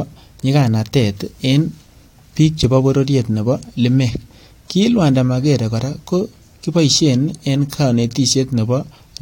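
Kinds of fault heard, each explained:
Nothing stood out as a fault on listening to this speech recording.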